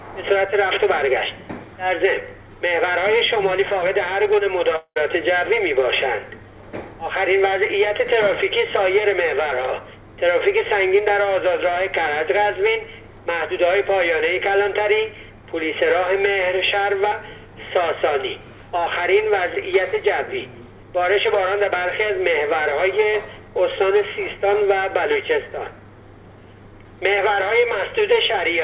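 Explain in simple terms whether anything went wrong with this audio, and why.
At 4.76 to 4.98 s the sound turns into a fading buzz, then briefly goes silent. This is likely a long network dropout: about 0.2 s was lost and skipped, not just a quick click.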